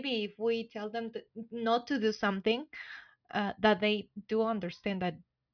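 No technical fault can be heard anywhere in the speech recording, and the signal stays steady and intact throughout.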